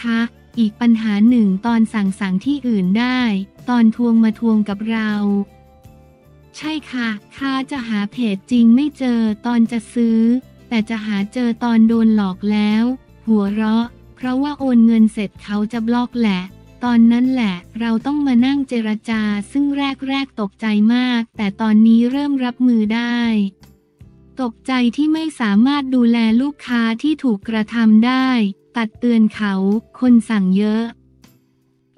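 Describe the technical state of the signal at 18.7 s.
The audio is intact at 18.7 s, with no technical fault present at that point.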